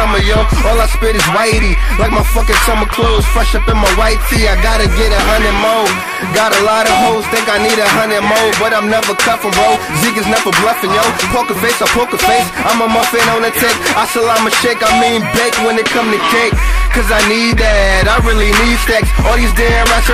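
Hard clipping runs through the whole clip: the level drives about 10 dB past what the stage can pass, so around a tenth of samples are cut flat. Loud sounds carry a harsh fuzz, the waveform shows squared-off peaks, and a spectrogram shows harmonics smeared high up.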